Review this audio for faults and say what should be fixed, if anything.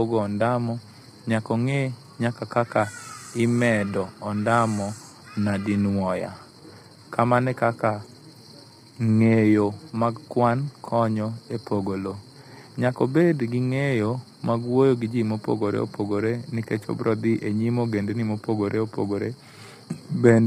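Channel delay (comb filtering) runs through the whole clip: one side sits a tiny fraction of a millisecond late, a few samples, and when the channels are summed to mono the shared sound cancels at evenly spaced frequencies, with the first notch around 5 kHz. That leaves the speech hollow and phasey. Re-align the channels sample-accurately before folding down, or take a single channel instead of summing.

For the whole length the speech is also rough and grainy, with noisy fill between the harmonics and nothing at all above 17.2 kHz. That heavy damage is likely low-delay AAC compression, AAC-ELD, whose short frames smear pitch detail, and it fits a bitrate around 24 kbps. Give the low-delay codec more bitrate, or use standard AAC when latency doesn't matter.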